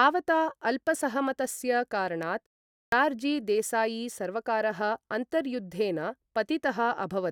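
A speech recording in which, at 2.72 s, the talker resumes after a short pause of about 0.34 s and the sound bursts in abruptly, its opening missing until 2.92 s. Roughly 200 ms of speech is swallowed: a clipped start after a pause. The output device dropped into a low-power state during the gap and needed that time to wake and lock again, so whatever arrived first never reached the speaker.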